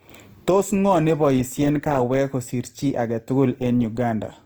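Opus compression is audible throughout this speech: it sounds grainy and rough, tones turn noisy, yet the band still reaches 20.2 kHz. The likely cause is Opus in music mode filling bit-starved bands with folded or noise content, which fits a bitrate around 24 kbps.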